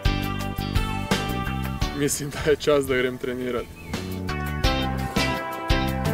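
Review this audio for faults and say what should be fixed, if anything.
A train of clicks runs from 4.64 s to 6.06 s: about ten short pulses of much the same shape, evenly spaced at roughly 6.4 per second, peaking about 5 dB above the surrounding audio. The steady ticking sits on top of the sound rather than coming from it, most likely from electrical interference from nearby equipment or a faulty connection or power supply. Keeping cables away from other gear, using a stable, well-grounded interface, and checking the input chain before recording should stop it.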